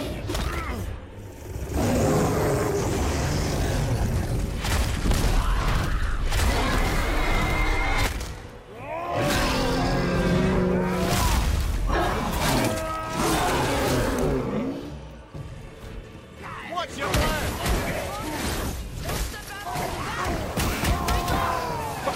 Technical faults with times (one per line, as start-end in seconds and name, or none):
17.07-20.05 wrong sample rate